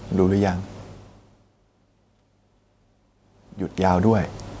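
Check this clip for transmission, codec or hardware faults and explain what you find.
No fault can be heard in this speech recording. The level changes near 1 s and 3 s come from the talker moving relative to the microphone, the background noise belongs to the room, and the lack of content above 8 kHz comes from the call's microphone processing.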